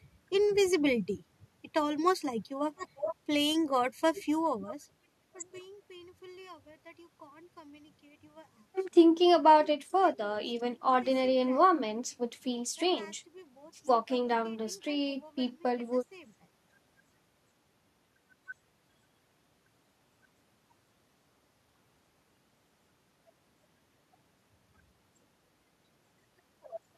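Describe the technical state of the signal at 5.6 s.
A fine ticking zipper noise rides on the speech from 4.27 to 5.59 s, ending right there. The level falls about 25 dB in unsmoothed 1 dB steps, roughly twenty per second.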